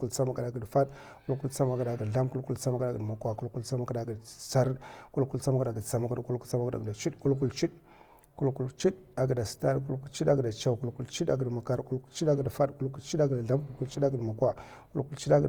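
Opus compression runs throughout the clip, likely in its music (CELT) mode at a rate that fits 24 kbps. Short of bits, it keeps each band's energy but fills detail by folding lower bands or adding noise, so the speech sounds plainly rough and grainy, with content across the full band.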